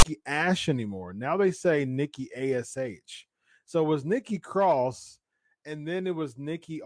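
A speech clip whose player read the file tags as audio: text metadata and zero padding play from 0.00 to 0.05 s as a hard-edged, one-sided rasp followed by silence.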